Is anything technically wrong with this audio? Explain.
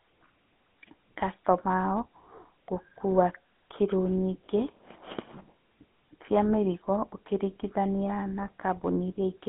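Yes. Throughout, GSM full-rate codec damage: sparse pulse-driven excitation makes the speech buzzy and gravelly within 200 Hz to 3.6 kHz, where plain telephone filtering would sound smooth.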